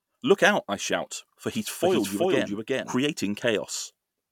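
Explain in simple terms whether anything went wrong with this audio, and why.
From 1.55 to 2.93 s, the speech plays twice. A second copy, just as loud, trails about 0.4 s behind. This is a doubled audio track. It was likely caused by the sound being captured again through a slower path. The copy starts and stops suddenly.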